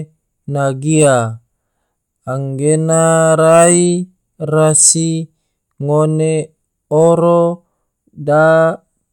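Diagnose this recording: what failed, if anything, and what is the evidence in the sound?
Nothing failed here: I can't hear anything going wrong anywhere in the signal chain, so there's nothing to diagnose in this speech recording.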